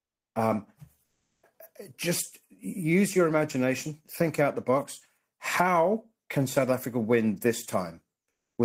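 Speech, with one stretch where comfort noise takes the place of the background, from 1.03 to 1.39 s (about 360 ms). In that pause the real room tone, already about 55 dB below the loudest speech, gives way to a flat, featureless hiss about 4 dB quieter. The likely cause is discontinuous transmission, as in Opus DTX, where the receiver synthesises noise while the sender is silent. A spectrogram shows a smooth, textureless band with abrupt edges, and the waveform a slightly lower, uniform noise floor.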